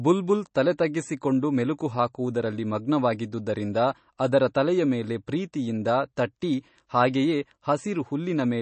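From start to finish, the speech carries plainly audible MP3 compression damage. Nothing sounds above about 8.3 kHz, so the top end is cut off flat. Quiet detail swirls and sounds watery. S sounds turn metallic and chirpy. The likely cause is an encoder starved of bits, which fits a low bitrate of around 32 kbps. It drops the treble at a fixed point and switches weak frequency lines on and off between frames.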